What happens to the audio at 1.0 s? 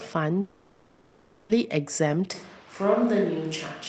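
At 1.0 s the audio sits inside a long network dropout running from 0.41 to 1.51 s, likely caused by packets that never arrived. The receiver fills the whole gap with a fading buzz, visible on a spectrogram as smeared, repeating bands that thin out into a low, featureless floor.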